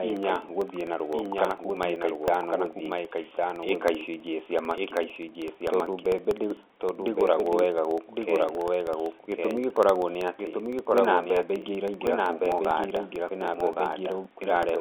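A second copy of the speech runs about a second behind the first, a few decibels quieter, full-band and dry, with no decay or room tone, through the whole clip. This doubled audio track is likely a second capture path or an edit holding two misaligned copies.

From 0.10 s to 14.76 s, small regular ticks sound under the speech every 64 ms, heard only while signal is present. These are periodic USB or driver dropouts: a background task stalls the bus or driver, and each time well under a millisecond of audio is replaced with silence. The telephone-band G.711 sound, nothing above about 3.7 kHz, is expected for that coding.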